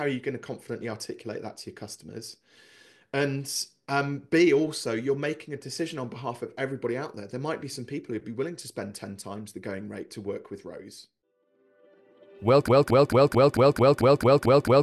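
At 12.68 s the audio locks into a broken-record loop. A fragment about 0.22 s long repeats exactly, back to back, ten times. It runs to the end of the clip without recovering. The effect is a rapid, mechanical stutter with no forward progress. Whatever should have played over those final seconds never arrives. This likely comes from a stalled player, encoder or stream that kept resending the last piece it held.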